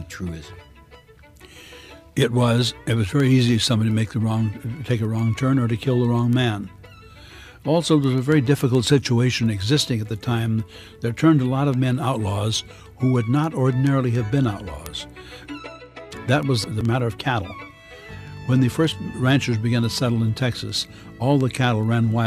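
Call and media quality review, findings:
Word clock ticks, 0.21 s to 22.26 s: sharp ticks of uneven strength, about every 0.15 s, roughly 150 in total. Receiver on its own clock, around 150 ppm off the sender, drops or repeats one sample per slip. Steady spacing rules out random clicks.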